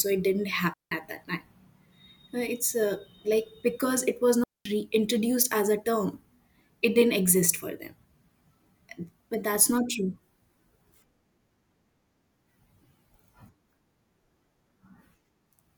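Digital wireless dropouts occur twice in this speech, at 0.74 s and again at 4.44 s. Each time the radio link between transmitter and receiver loses more data than it can recover, so the receiver mutes instead of passing damaged audio. The first hole lasts about 180 ms, the second about 220 ms. Both are clean gaps of near silence, entered and left through a very quick fade, with no crackle or noise burst on either side.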